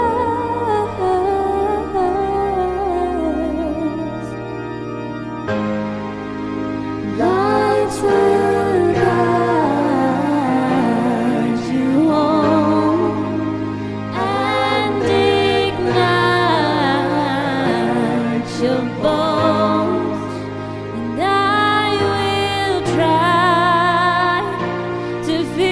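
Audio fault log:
Nothing to log here; I couldn't hear a single glitch anywhere in the clip.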